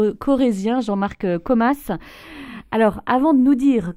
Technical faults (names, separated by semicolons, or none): channels drifting apart